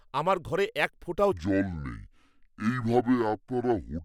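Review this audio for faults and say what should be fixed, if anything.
From 1.32 s to the end, after "আমার ঘরে এক ফোঁটাও", a section at the wrong speed plays at 0.625 times, dropping pitch about seven semitones, likely from a mismatched clock. Check sample-rate and clock settings across every editing and playback stage.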